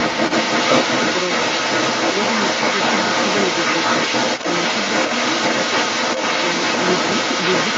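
From the start at 0 s to the end at about 7.78 s, a second voice runs alongside the main talker. It sits roughly 5 dB above the speech, and sounds band-limited like the rest of the audio, with nothing above 8 kHz. The other side's voice leaking through is likely the cause: the far party's audio played from the talker's loudspeaker was picked up by the microphone and not fully removed by echo cancellation.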